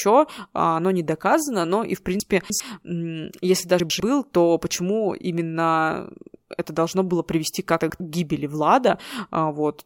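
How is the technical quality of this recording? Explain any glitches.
The recording has three short jumbles where chunks play out of order. From 2.2 to 2.6 s, right after "доказано но и в", one 100 ms chunk turns up three slots late. At 3.8–4.0 s, just before "то почему именно это", and at 7.8–8.0 s, between "это должно было привести" and "к гибели", a chunk lands one slot late. Nothing is lost, but each swap leaves hard joins and makes the speech briefly scrambled.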